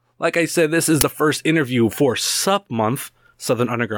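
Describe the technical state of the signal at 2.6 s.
At 2.6 s the speech signal is intact, with no audible technical fault at that point.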